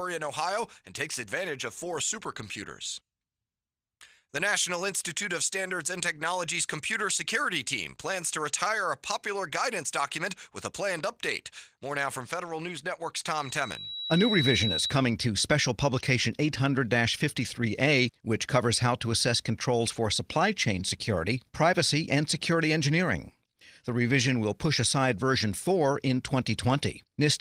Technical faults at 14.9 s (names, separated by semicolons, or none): loudspeaker feedback squeal